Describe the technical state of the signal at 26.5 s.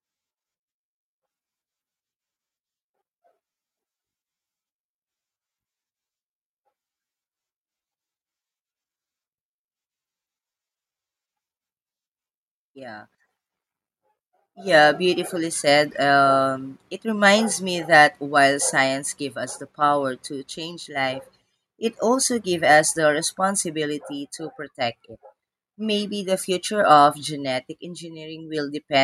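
At 26.5 s the speech signal is intact, with no audible technical fault at that moment.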